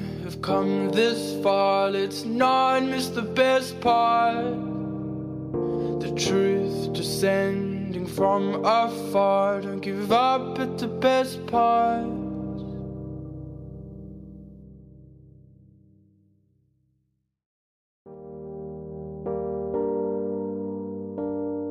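No technical faults can be heard anywhere in this audio. Nothing in the sound points to a problem in how it was captured, processed or delivered.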